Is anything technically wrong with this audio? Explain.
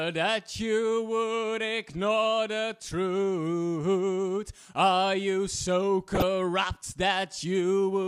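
Yes. DAB burbling appears from 6.15 to 6.22 s. Weak reception let bit errors past error correction into the MP2 data, corrupting audio data across what fits about five frames, so individual sub-bands get short blips of noise, giving a brief burble over the audio.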